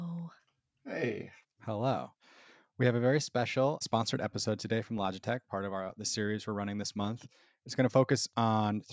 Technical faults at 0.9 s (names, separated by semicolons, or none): none